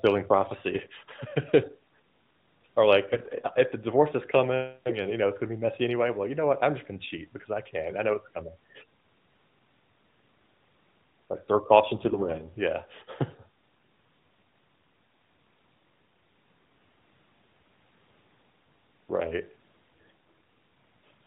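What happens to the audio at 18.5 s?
Nothing goes wrong at 18.5 s: the speech carries on intact through that moment, heard as before through the AMR narrowband mobile codec at 12.2 kbps.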